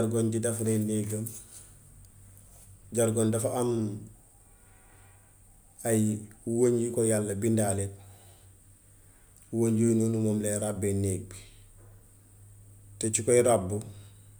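No technical faults are audible anywhere in this speech recording.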